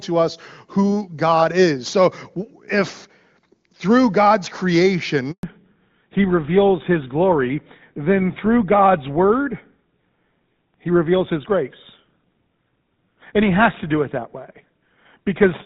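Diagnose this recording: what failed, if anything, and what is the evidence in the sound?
The failure is a handover gap at the network stage. The speech breaks off at 5.31 s and stays silent until 5.43 s, a 120 ms hole with no comfort noise or concealment filling it. This fits the call being moved from one network to another, with no speech frames delivered while the new link was set up. Whatever was said in that window is gone rather than smeared or repeated.

A fallback to narrowband, a codec change negotiated at the network level, follows straight after the gap. Before 5.31 s the audio carries the wider band of AMR wideband (HD Voice), with only faint coding damage, consistent with its top 23.85 kbit/s mode. From 5.43 s to the end, nothing remains above 4 kHz, and the speech turns duller and rougher. That fits a drop to the older GSM full-rate codec at 13 kbit/s on the new link.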